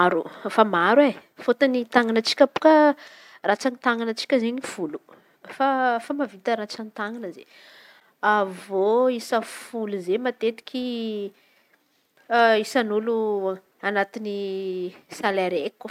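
A digital gain change was likely applied at 3.08 s without any ramp, dropping the level by about 6 dB from one sample to the next. From there to the end, the speech and its background noise sit abruptly and uniformly quieter, a sudden gain jump.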